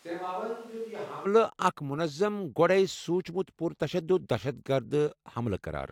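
Switch to a distant microphone from the start to 1.25 s in this speech clip: the voice sounds roomy, hollow and thin, roughly 10 dB quieter, with room noise near 25 dB below it, likely because a faraway microphone stood in for the close one before the sudden change back.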